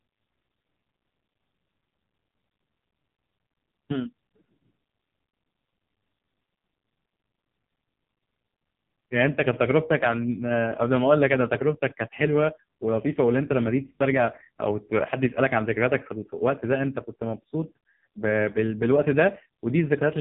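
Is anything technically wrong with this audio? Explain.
Yes, the whole thing has been through the AMR narrowband mobile codec, and hard. Throughout the speech, nothing gets above about 3.8 kHz, so it's got that boxed-in phone-call dullness. AMR-NB samples at 8 kHz and rebuilds the voice from a vocal-tract model fed by a handful of pulses per 5 ms slice. Here it's starved of bits, which fits one of its lowest modes at around 5 kbps, so the voice comes out buzzy and synthetic.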